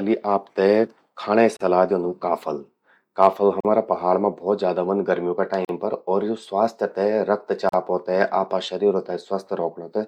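Four short dropouts break the speech at regular 2.0 s intervals: 1.57 to 1.60 s (about 38 ms), just before "द्योंदू काफल काफल"; 3.60 to 3.65 s, right after that phrase; 5.65 to 5.69 s, following "ज्यादा ह्वंद गर्मियों का"; and 7.69 to 7.73 s, each about 43 ms. These are gaps at the joins of encoded pieces. The audio was coded in 2 s segments and concatenated untrimmed, so every segment's encoder start-up delay and final-frame padding remain as silence. Each gap has smeared edges, and the speech resumes exactly where it stopped.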